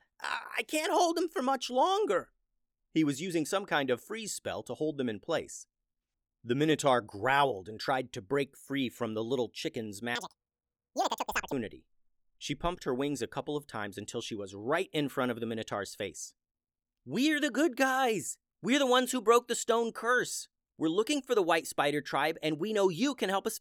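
Speech, with the audio read two samples at a time (double speed) from 10.15 to 11.52 s. The reader treats each pair of samples as one frame, so the stretch plays at 2x speed and an octave (12 semitones) higher.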